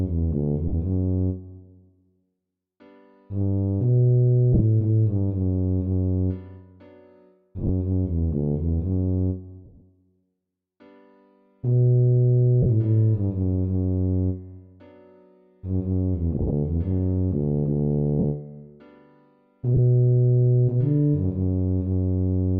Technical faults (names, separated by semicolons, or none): lost LE Audio frames